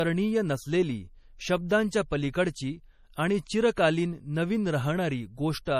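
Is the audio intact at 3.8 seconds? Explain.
No. Just before, at 3.76 s, a sharp attack landed late in a transform block, so quantisation noise meant for the loud part spread about 12 ms back into the quiet moment ahead of it. This pre-echo is heard as a brief hiss before the onset, which sounds softened. Across this stretch, likely MP3 compression at a low bitrate (consistent with about 40 kbps) is starving weak frequency lines and dropping everything above 15.1 kHz, leaving a dulled top end with audible watery, swirling artefacts.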